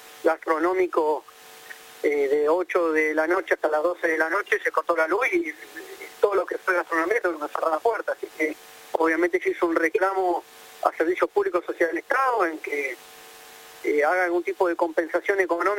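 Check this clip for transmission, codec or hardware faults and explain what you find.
No transmission, codec or hardware faults are audible anywhere in the clip.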